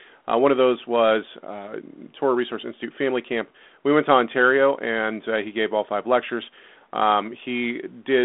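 No technical faults can be heard in this recording.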